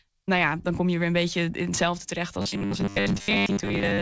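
Robotic sound from repeated short buffers begins at 2.35 s and runs to the end of the clip. The speech collapses into a rigid, metallic buzz fixed at 100 Hz that still loosely tracks the syllables. This is likely because audio arrived too seldom and playback looped the newest fragment to fill the gaps. The 100 Hz pitch fits a 10 ms buffer being replayed, and most of the real signal was skipped.

Short concealed packet loss sits inside that stretch at 2.50–2.54 s, 2.66–2.70 s and 3.18–3.21 s. Each time, about 20 ms of the stream failed to reach the decoder. The receiver extrapolated the preceding sound across the gap and then crossfaded back, which is heard as a brief smear or wobble. Throughout, the call path's band limit is audible as nothing above 8 kHz.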